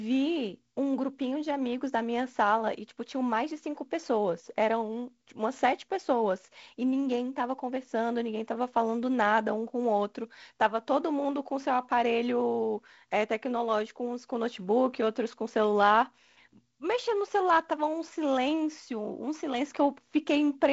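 No technical faults can be heard in this speech recording.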